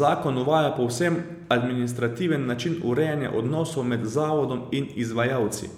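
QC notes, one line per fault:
No faults heard.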